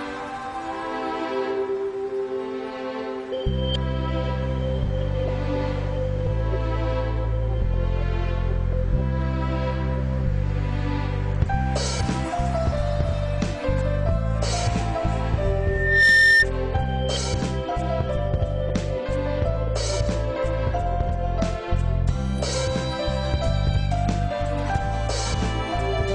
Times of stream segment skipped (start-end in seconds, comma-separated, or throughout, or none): none